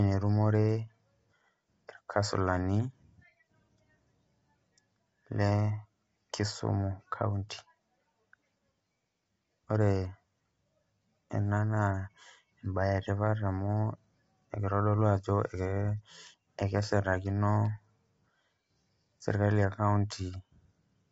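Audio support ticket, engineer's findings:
Speech rough and grainy throughout, nothing above 7.8 kHz. Likely low-delay AAC compression (AAC-ELD). Short frames smear the harmonics, and the damage fits a 24 kbps stream.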